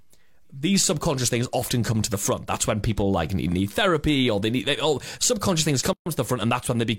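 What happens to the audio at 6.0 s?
Right after "they oh subconscious things", the speech drops out from 5.93 to 6.06 s, a gap at a join of encoded pieces. Separately encoded segments were joined untrimmed, leaving about 131 ms of encoder delay and padding as silence with smeared edges before the speech resumes where it stopped.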